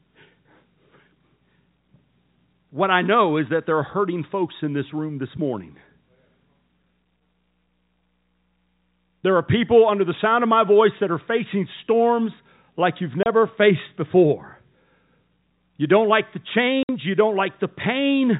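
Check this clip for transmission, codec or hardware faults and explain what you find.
Two short dropouts point to packet loss filled with silence, heard over the telephone-band sound of G.711 coding, which cuts everything above 4 kHz.

At 13.23 s a 30 ms hole, and at 16.83 s a 60 ms hole, chop the speech with hard edges. Lost packets were replaced by silence, and the lengths fit one and two 30 ms packets.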